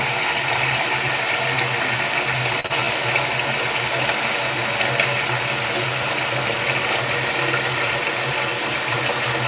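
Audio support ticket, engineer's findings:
Short stall from a late packet, 2.60–2.66 s: sound held about 43 ms with slight buzz or dip. Jitter buffer ran empty; receiver stretched last sound until packet arrived, nothing lost, delay up 43 ms.

Short concealed packet loss, 2.66–2.86 s: brief smear or wobble. 40 ms never decoded; jitter buffer/decoder concealment extended last sound over 30 ms, then blended back into real audio.

Jitter buffer speed-up, 8.01–8.38 s: sound hurried, pitch unchanged, about 115% speed. Buffer over target; receiver cut short pitch-period chunks, roughly 70 ms total. G.711 mu-law path, nothing above 4 kHz.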